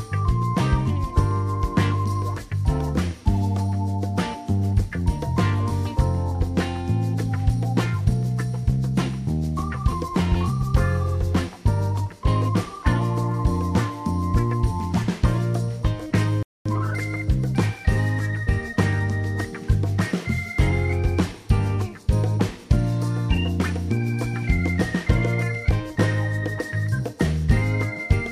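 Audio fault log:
16.43–16.66 s, playback stall: the player likely ran short of data or had its thread held up, so output dropped to silence for about 0.23 s in mid-flow before the audio resumed. Heard as an abrupt gap of roughly a quarter second breaking a continuous stream.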